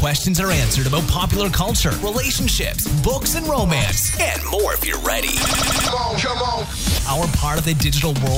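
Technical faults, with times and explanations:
5.46–5.89 s, system hang loop: the audio suddenly locks onto one 85 ms slice and plays it five times back to back, giving a rapid machine-gun stutter at about 11.7 Hz. The system briefly froze while the sound hardware kept cycling through the same ring buffer, and that loop length fits a 4096-sample buffer. When it lets go, around four tenths of a second of the real audio is simply gone.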